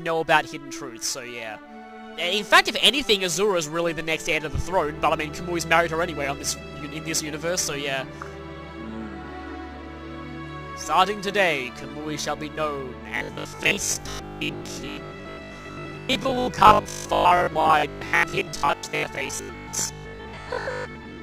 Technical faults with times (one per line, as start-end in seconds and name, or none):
13.17-21.21 robotic sound from repeated short buffers